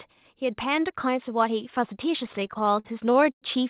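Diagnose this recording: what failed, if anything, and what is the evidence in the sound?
Automatic gain rising, from 0.4 s to the end, at the call-processing stage. Speech and background noise grow louder together in a smooth, gradual climb with no step, because the gain control judged the input too quiet and kept raising its gain.

Repeated stalls (stutter) between 2.26 and 3.44 s, at the network and jitter-buffer stage. Thirteen hold-ups, the longest 101 ms, fill roughly a fifth of that span. Late packets emptied the buffer, so the receiver extended the last sound until data arrived. Nothing is lost, but the speech drags.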